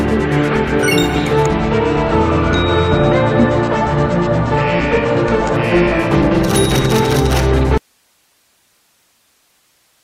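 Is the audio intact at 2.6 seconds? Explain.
No, 2.6 s falls inside an adaptive stream at a lower bitrate stretch from 1.55 to 5.55 s. The connection dipped, so nothing above 9 kHz survives, consistent with a 32 kbit/s fallback.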